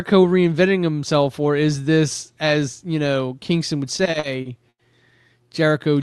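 Speech that stutters through repeated stalls from about 3.97 s to 4.82 s: six hitches where the receiver's jitter buffer ran dry and it stretched the last sound to cover, about 220 ms in total and up to 100 ms at a time, roughly a quarter of that stretch. On a spectrogram these look like short smeared, frozen bands, the longer ones fading. The waveform shows repeated, flattened segments, with nothing cut out. Energy stops near 12 kHz, which fits the Opus call codec.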